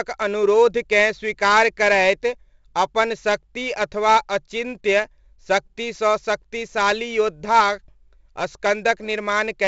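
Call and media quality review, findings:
4-bit ADPCM compression, whole clip: gritty hiss riding every loud syllable, heavy, harsh on sharp attacks where the step size lags. Nothing above 7.8 kHz, so dull top, which fits a 16 kHz rate at 64 kbps. Codec stage.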